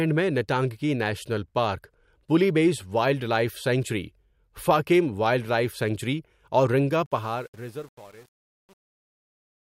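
The fade-out stage at the end of this speech clip keeps too few bits and adds no dither, which fits a path working at 8 bits, so truncation distortion on a fade sets in at 7.06 s, just after "وائلڈ لائف سینکچری اور". As the level drops toward the smallest step the waveform collapses into coarse square steps. From 7.26 s to the end at 9.77 s the tail turns gritty.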